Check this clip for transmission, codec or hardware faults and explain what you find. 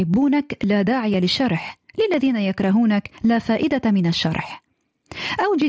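Two faults are audible: gain pumping across the whole recording, and a regular train of short dropouts.

The gain pumping runs from start to finish, with the gain swinging by about 15 dB. The likely cause is input gain set far too high for the microphone, with a fast limiter or compressor clamping down on every peak and releasing in the gaps. Loud and quiet passages sit unnaturally close in level, and the speech sounds squashed and breathing.

The periodic USB or driver dropouts run from 0.14 s to 5.62 s, spaced every 0.5 s, about ten in all. At each one, roughly a millisecond of audio is skipped outright rather than replaced with silence, so the waveform jumps and produces a small tick or pop. The strict spacing points to a background task stalling the USB bus or audio driver on a fixed timer. The ticks are heard only while speech is present, not during silence.

The band stops at 8 kHz, consistent with the Bluetooth mSBC headset codec, which adds a light graininess on louder syllables.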